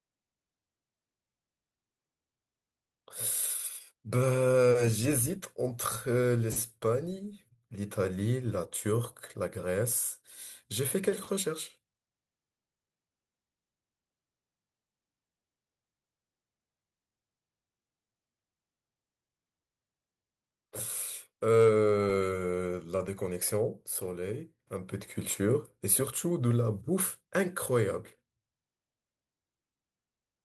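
No technical faults can be heard in this recording.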